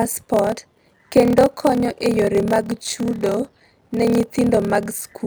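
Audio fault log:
Throughout, block size mismatch (padded): the speech has a steady buzz at about 38 Hz, where each block is padded with a short run of zeros. It runs at about 0.89 times normal speed with its timbre unchanged, which fits 1024-sample blocks read as roughly 1152.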